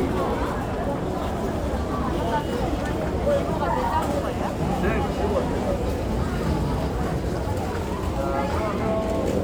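No technical faults are audible.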